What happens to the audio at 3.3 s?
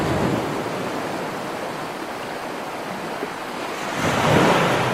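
At 3.22 s a call bitrate drop from 128 to 28 kbps coarsens the coding until the end, so the sound turns rough and muffled, and the spectrogram loses its upper band.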